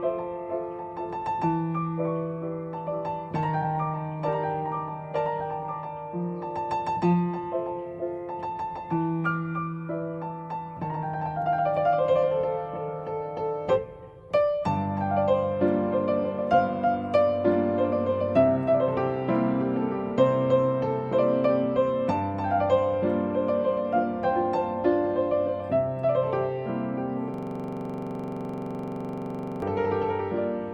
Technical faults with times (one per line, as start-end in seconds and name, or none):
27.34-29.62 system hang loop